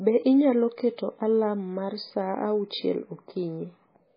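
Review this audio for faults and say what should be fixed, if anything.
Heavy MP3 compression damages the speech throughout, most likely from a low-bitrate encode: nothing survives above 5 kHz, and starved frequency lines flicker between frames into a watery swirl, which fits roughly 16 kbps. That swirl separates it from a plain low-pass filter, which dulls without warbling. Encode at a higher bitrate, or keep a lossless master and compress only once at the end.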